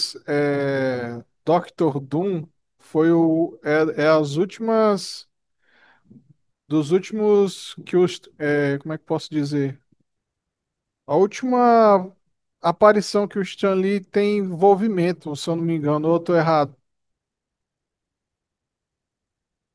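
No audible technical faults.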